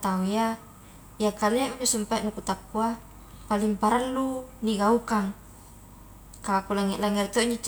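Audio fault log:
No faults are heard; the speech signal stays continuous and steady throughout, with no audible technical disturbance at any point.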